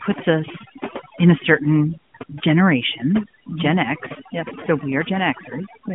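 Throughout the speech, the background drops to near silence dotted with twinkling specks. This is overdone noise removal, with bands near the noise estimate cut away along with quiet speech detail.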